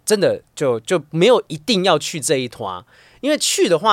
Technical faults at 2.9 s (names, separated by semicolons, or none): none